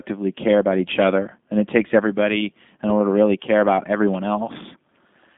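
From start to finish the speech carries G.729 codec damage, plainly audible throughout. The sound is rebuilt from a vocal tract filter, a pitch predictor and sparse pulses per frame rather than carried as a waveform, which gives the rough, slightly synthetic texture that fits an 8 kbit/s G.729A stream. The band sits at about 150 Hz to 3.6 kHz, with nothing above 3.8 kHz, so sibilants and airiness are gone.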